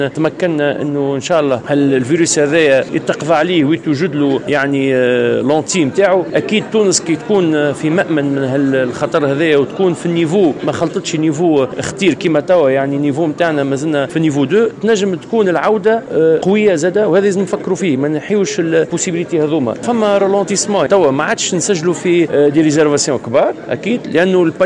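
No technical faults can be heard anywhere in this audio.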